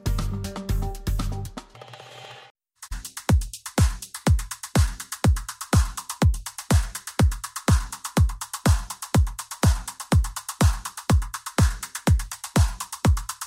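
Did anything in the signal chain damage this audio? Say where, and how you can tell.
No, nothing along the signal chain audibly damaged this audio. At no point does the sound point to trouble in the wiring, conversion, processing, transmission, storage or playback stages.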